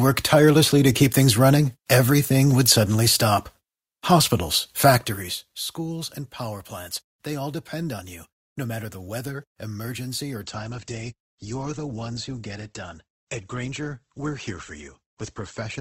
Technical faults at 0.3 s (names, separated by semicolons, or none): none